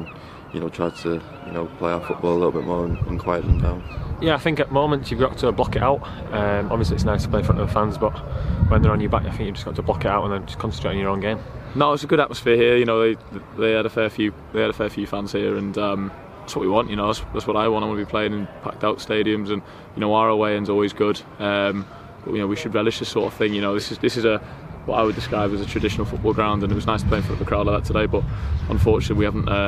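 No technical faults can be heard anywhere here.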